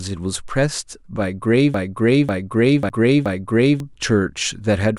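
From 1.74 s to 3.80 s there is a broken-record loop. A fragment of about 0.54 s plays four times, back to back, with no gap. The cause is likely a stalled stream that kept resending its last chunk. The audio due in that span never arrives.

At 2.89 s, inside the loop, comes a CD skip. There is a brief mute of a few milliseconds. Then playback resumes from another spot. This is the pickup jumping to a different turn of the disc.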